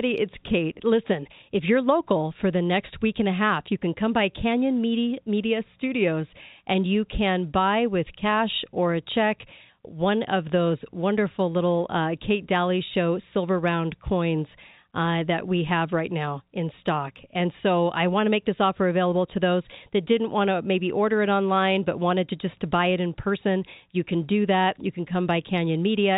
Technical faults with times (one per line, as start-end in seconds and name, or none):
none